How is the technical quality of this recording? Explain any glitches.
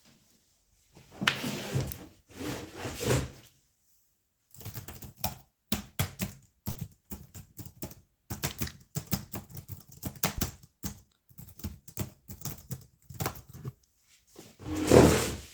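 The recording has one audible glitch, a short concealed packet loss at about 6.71 to 6.77 s. It comes across as a brief smear or wobble, where the sound seems to stretch oddly for an instant before settling back. About 40 ms of audio never arrived in time, so the receiver patched the gap by extending the preceding sound, then blended into the real signal again, leaving that short blur.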